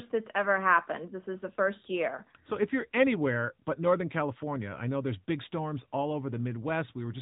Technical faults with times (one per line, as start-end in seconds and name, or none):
0.00-7.21 AMR narrowband mobile codec